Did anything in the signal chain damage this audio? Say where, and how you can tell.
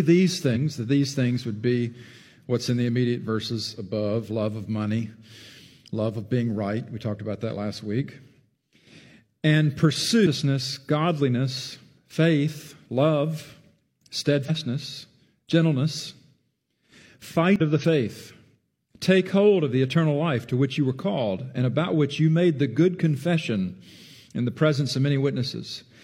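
Yes. The damage sits at the codec stage: damaged data in a compressed stream, where corrupted bytes made the decoder misread frames, lose sync and hunt for the next valid frame header. Each event is a brief chirp or blip of roughly 50 to 60 ms, at 0.51 to 0.57 s, 10.22 to 10.27 s, 14.45 to 14.50 s and 17.56 to 17.61 s. The sound within each span is replaced by that garbled burst before clean decoding resumes.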